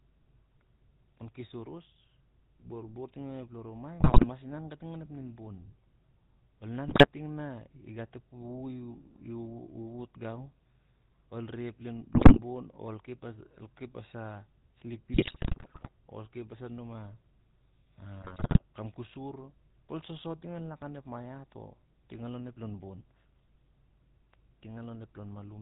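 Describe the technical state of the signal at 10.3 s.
At 10.3 s you're hearing the GSM full-rate codec, same as across the whole clip. Nothing above 4 kHz survives, and the pulse-driven, decimated excitation gives the speech that plainly buzzy, gravelly roughness, which fits the old 13 kbps full-rate coder.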